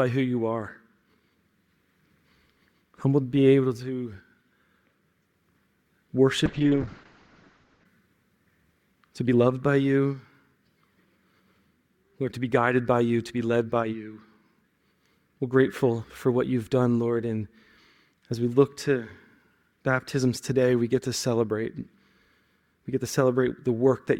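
A call bitrate drop hits the audio from 6.46 to 7.91 s. The encoder falls from 64 to 7 kbps, turning coarse and muffled, with bandwidth narrowing from 20 kHz to 8 kHz.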